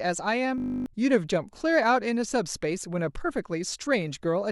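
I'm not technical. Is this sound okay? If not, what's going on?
No. From 0.58 to 0.86 s there's a system hang loop: the computer froze, replaying one 20 ms snippet as a 50 Hz buzz, losing about a third of a second of speech.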